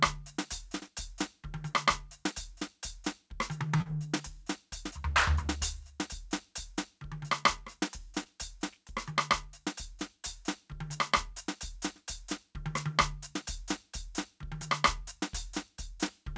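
At 3.76 s the music hits a short stall from a late packet. The jitter buffer ran dry, so the receiver held the last sound for about 39 ms until the data arrived. Playback then resumed where it had left off, now 39 ms later. Nothing is lost, but one moment lingers with a faint buzz or dip.

Right after, from 3.82 to 3.87 s, comes short concealed packet loss. About 40 ms of audio never arrived and was bridged with roughly 35 ms of extrapolated continuation. The result is a brief smeared wobble before the real signal fades back in. A second, smaller loss at 8.23 to 8.27 s replaces 20 ms the same way, heard as a quick smeared blur. Throughout, nothing sits above 8 kHz, which fits a wideband call codec such as G.722 at 64 kbps.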